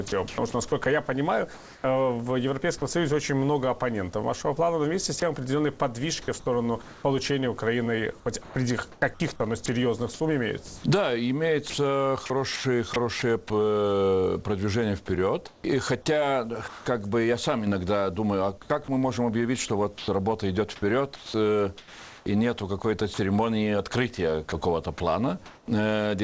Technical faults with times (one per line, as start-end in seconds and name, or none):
0.08-2.82 sound chopped by the voice detector
5.20-5.22 sound dropped by the voice detector
6.82-7.04 comfort noise in place of the background
8.44-13.22 sound chopped by the voice detector
15.48-16.86 sound chopped by the voice detector
18.62-25.68 sound chopped by the voice detector